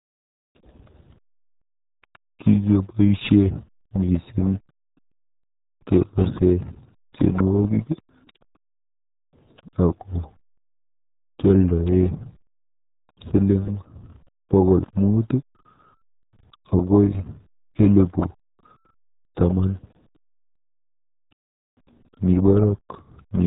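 From the first second to the last, the speech sits under the RealAudio 14.4 codec, and the damage is heavy. Nothing gets through above about 3.8 kHz, so it's muffled and gargly, with a starved, smeared texture that fits an old 8 kbit/s dial-up stream.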